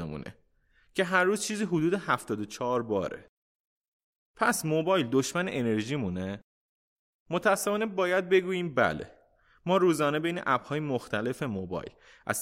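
Nothing in the speech stood out as a technical fault on listening.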